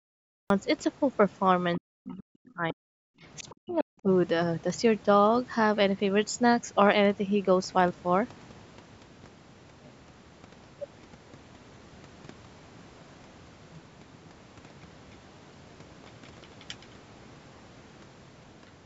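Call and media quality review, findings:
Cut-off start: capture or stream began late, audio opening mid-sound out of digital silence at 0.50 s. No natural attack or fade-in; the first sound arrives abruptly, already underway.

Speech suppressed in double talk: likely echo canceller misjudging near-end speech as loudspeaker echo during simultaneous talk. Near-end level pulled down by up to about 40 dB, 1.78–2.85 s (around a second affected) and 3.42–4.09 s (under half a second), sound dipping.

Other side's voice leaking through: likely incomplete echo cancellation, residual far-end playback passing into the microphone path. Brief scraps at 2.46–2.50 s, very faint, roughly 35 dB below the talker, and 3.69–3.73 s, somewhat stronger at about 25 dB down, both inside the suppressed stretches.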